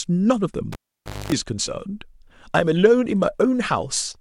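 A cable pulled and plugged in interrupts the speech from 0.72 to 1.32 s. A live connection is yanked out, giving a sharp pop, and the signal drops to near silence for about 0.55 s. As the plug goes back in, its tip makes contact before the ground does, so a 50 Hz mains buzz bursts through for roughly 0.24 s before a second pop as the full connection seats and the speech returns.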